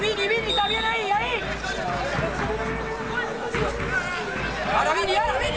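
No technical faults can be heard anywhere in this clip.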